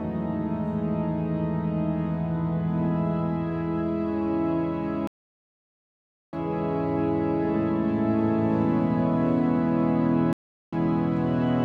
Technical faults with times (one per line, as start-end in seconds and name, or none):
5.07-6.36 stream reconnect
10.33-10.75 stream reconnect